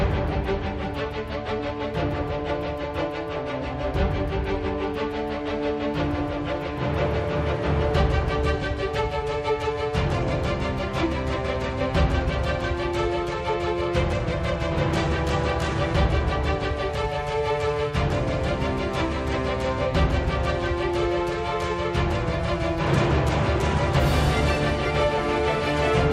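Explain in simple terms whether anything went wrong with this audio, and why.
Nothing went wrong with this audio that a listener can pick out. It runs without any break, glitch or sudden change in how it sounds.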